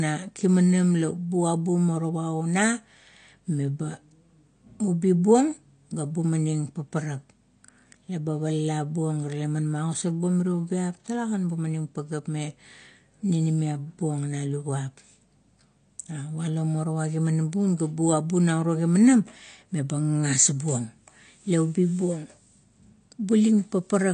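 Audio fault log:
throughout, AAC compression: the speech sounds dull and smeared, with nothing above 9 kHz, likely from AAC-LC coding at a low bitrate, which fits 32 kbps.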